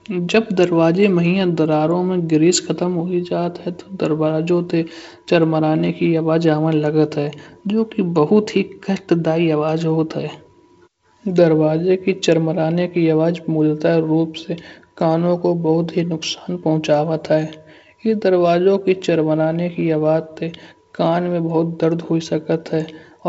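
There are no technical faults to describe in time order; the speech comes through G.722 wideband telephone coding with audio extending to about 7.7 kHz.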